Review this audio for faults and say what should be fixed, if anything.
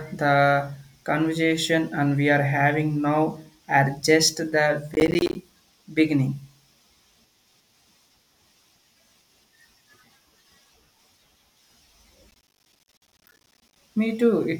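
Processor overload crackle appears from 4.94 to 5.35 s and again, longer, from 12.31 to 13.76 s. The processor repeatedly failed to fill its audio buffers on time, and each miss left a short silent hole with abrupt edges. Each roughly 10 ms long, which suggests buffers of about that size, these holes merge into a gritty tearing over the speech. A single dropout would leave one clean gap. Here the rapid train of gaps sounds like crackle. Prevent it by enlarging the buffer or reducing processing load.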